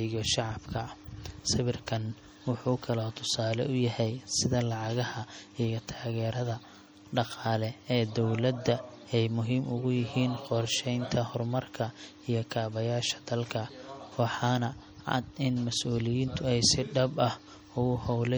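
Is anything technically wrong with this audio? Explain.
Yes. Throughout the speech the sound is watery and swirly, with a metallic chirp on s sounds and smeared consonant attacks. The likely cause is MP3 compression at a low bitrate, around 48 kbps, which zeroes weak frequency lines that flicker on and off between frames.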